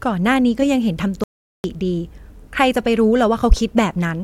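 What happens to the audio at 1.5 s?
Speech cuts to complete silence, with no room tone, from 1.24 to 1.64 s. This is an audio dropout to silence, likely lost input recorded as silence.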